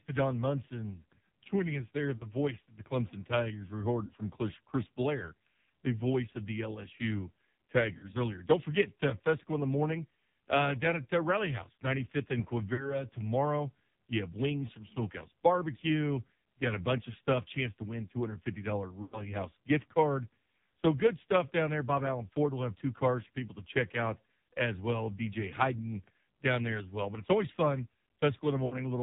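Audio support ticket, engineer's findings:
AMR narrowband mobile codec, throughout: heavy codec damage, nothing above 4 kHz, buzzy synthetic speech from the pulse-driven vocal tract model, which fits a low mode near 5.9 kbps.

Lost AMR speech frames at 2.18–2.32, 4.06–4.13, 7.98–8.13, 12.74–13.01, 19.02–19.22 and 28.66–28.77 s: the decoder repeats the last good pitch and tract settings at falling gain, so the sound is smeared and fading. The longest gap, at 19.02 s, fits about five missing frames.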